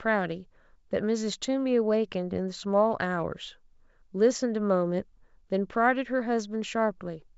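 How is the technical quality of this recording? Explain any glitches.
No audible glitches or faults.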